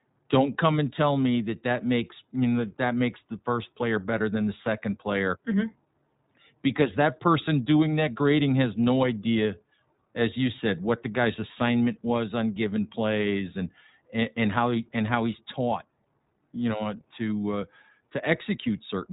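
From start to finish the speech carries iLBC codec damage, and it's plainly audible. Nothing gets past about 3.8 kHz, so it's dull and boxy, with a rough, synthetic edge. Each short frame is coded on its own, which fits 20 ms frames at around 15.2 kbps.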